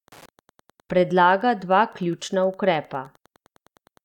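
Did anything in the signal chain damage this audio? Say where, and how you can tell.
Yes. In the analogue wiring, a nearby Wi-Fi radio is being picked up and rectified, producing Wi-Fi interference: a steady tick about every 102.4 ms, ten times a second, running through the whole speech clip at a low level, roughly 35 dB beneath the speech.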